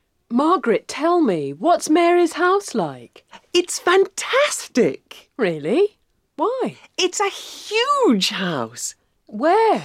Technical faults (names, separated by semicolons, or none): none